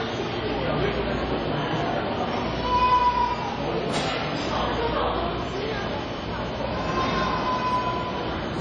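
WMA compression throughout: nothing above 10 kHz, with ringing, washy smearing and breathing hiss, likely from a transform codec at a low bitrate around 32 kbps.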